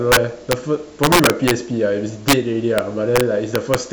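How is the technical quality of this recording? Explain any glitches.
The recording is marred by integer overflow on this speech, at 0.12 to 0.53 s, 1.04 to 1.51 s, 2.28 to 2.33 s, 2.78 s, and from 3.16 s to the end. Signal pushed about 1 to 4 dB past the integer ceiling wraps to the opposite sign instead of limiting, so loud peaks snap into violent cracks far harsher than clipping.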